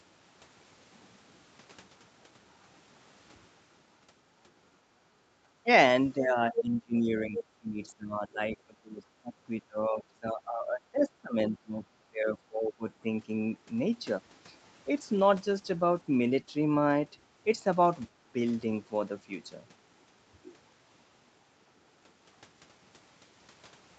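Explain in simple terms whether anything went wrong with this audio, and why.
A few things went wrong, all typical of a call.

Around 5.16 to 5.33 s the background gets gated by the echo canceller. While the loudspeaker was playing, the canceller turned the microphone down hard, so the room sound briefly dips by a clear step and comes back once it lets go.

Next comes what's likely speech suppressed in double talk. There's a short dip at 5.63 to 5.67 s, then a long stretch from 6.19 to 12.87 s where the speech keeps getting pushed down, cutting in and out for about four seconds in total, when both sides were talking at once.

Within that stretch, at 6.56 to 6.60 s and 7.37 to 7.44 s, you can hear short scraps of a second voice. That's likely the other side's voice leaking through, where the loudspeaker sound wasn't fully removed from the microphone. The first scrap is about as loud as the main speech.

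Finally, from 15.01 to 18.85 s there's a call bitrate drop. The connection told the Opus encoder to use far fewer bits, so the speech turns rougher and more muffled, worst for just over a second, before it recovers.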